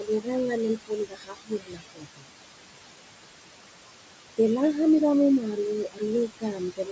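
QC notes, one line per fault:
Throughout: noise suppressor artifacts. The room noise, about 10 dB under the speech, is pulled down by about 21 dB frame by frame, so it sinks between the words and rises under them.
0–0.29 s, 0.76–2.28 s, 5.84–6.02 s, 6.28–6.9 s: speech cut by the noise suppressor. Quiet speech was treated as noise and dropped by about 15 to 22 dB, so parts of the speech sound swallowed or faint.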